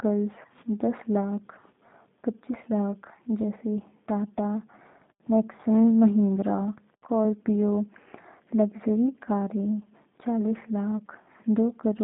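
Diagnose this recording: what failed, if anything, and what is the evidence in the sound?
Across the whole recording the speech sounds slightly rough and synthetic, with a buzzy, resynthesised texture and nothing audible above about 3.7 kHz or below about 150 Hz. The failure is at the codec stage: a G.729 codec, consistent with an 8 kbit/s G.729A stream, rebuilds each 10 ms frame from a vocal tract filter, a pitch predictor and a few coded pulses, and discards the upper band, so the voice loses its natural fine detail.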